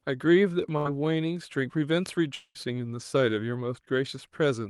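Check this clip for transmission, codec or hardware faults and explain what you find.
Two transmission faults are audible in this speech clip, both from lost network audio.

From 0.77 to 0.87 s there is a burst of packet loss. About 80 ms of audio never reached the receiver, which extended the last sound for roughly 74 ms while turning it down. The result is a brief fading buzz or hiss before the speech jumps ahead.

From 2.35 to 2.57 s the sound is likely a long network dropout. About 200 ms of audio went missing, and the receiver filled the gap by continuing the preceding sound as it faded away. A short silence of about 60 ms follows before the speech resumes further on, without the lost portion.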